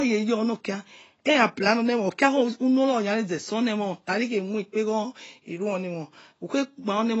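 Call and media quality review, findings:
Speech dull and smeared throughout, nothing above 7.9 kHz. Fizzy warble on sibilants. Likely AAC compression, consistent with AAC-LC near 24 kbps. Lowered cut-off, spectral holes or noise-filled bands from coarse quantisation.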